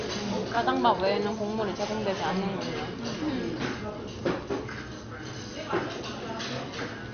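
Throughout the clip the audio sounds dull and gurgling, with a granular roughness and nothing above 6.5 kHz. This is likely MP2 compression at a low rate, which fits about 48 kbps. There are too few bits, so upper sub-bands are switched off and the remaining bands are coarsely quantised.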